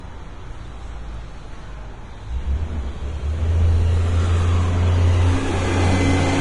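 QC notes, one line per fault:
Throughout: Vorbis compression, heavy and likely the cause. The treble has a hissy, grainy texture, tones come across roughened and attacks are smeared. Nothing is present above about 10.5 kHz, and the fine treble detail beneath that is noise-like, which fits a rate near 30 kbps. On a spectrogram there is a hard shelf at 10.5 kHz, with speckled, patchy upper bands where fine structure has been swapped for noise. The waveform shows softened transient edges.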